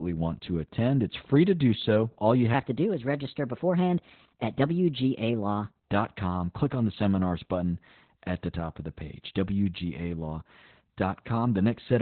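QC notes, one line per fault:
throughout: Opus voice compression. The speech was coded with Opus in SILK mode at 8 kbps, narrowband, with heavy codec damage. Nothing remains above 4.3 kHz, so the voice sounds muffled and slightly hoarse, and the coarse excitation coding gives it a faintly robotic edge.
2.54–5.90 s: section at the wrong speed. This stretch plays 1.2 times too fast, likely because it was fitted to the wrong clock. Speed and pitch rise together by roughly three semitones, so the speech turns hurried and higher than the surrounding audio.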